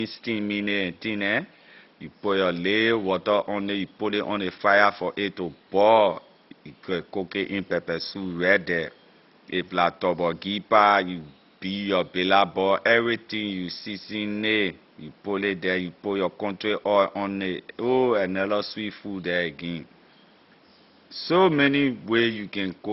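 From start to end the speech sounds dull, with a gurgling, granular roughness. This is heavy MP2 compression, likely at a rate fitting 32 kbps, which starves the upper sub-bands and switches them off. A spectrogram shows a hard ceiling at 5.6 kHz with blocky, flickering bands below.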